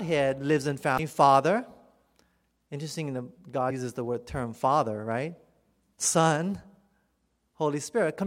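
At 0.98 s, just after "lives in", compressed frames are skipped. Roughly a tenth of a second of speech drops out. At 3.69 s, just before "uses the word term", a slightly shorter jump follows.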